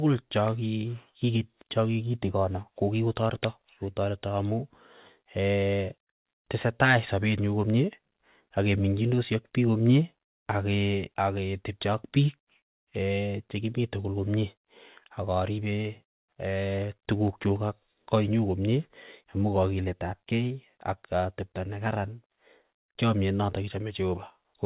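No faults detected in the speech; the band stops at 4 kHz, which fits a G.711 mu-law call path working normally.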